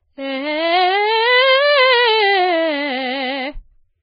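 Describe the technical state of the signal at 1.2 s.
At 1.2 s the music sits inside damage that runs through the whole clip. Nothing comes through above about 4.9 kHz, and what remains below is grainy and hissy, with roughened tones and smeared attacks. That's likely heavy Vorbis compression: at a bitrate that sounds down around 13 kbps, the encoder drops the top end and quantises the upper detail so coarsely that it turns into noise.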